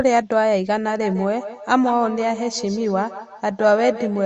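Speech with a feedback echo between two devices from 0.87 s to the end: each syllable returns at roughly 150 ms intervals, thinner and ringing, peaking about 11 dB below the speech. A second device in the room replays the call, and this microphone re-captures it beyond its own echo canceller's reach.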